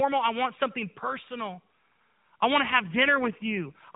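An AMR rate drop begins at 2.66 s, just after "I want to", and lasts to the end. The speech stays within the AMR narrowband codec's 4 kHz band, with no gap, but turns buzzier and more synthetic. This fits a fall from 12.2 kbps to about 5.9 kbps, with the freed bits spent protecting a weak radio link.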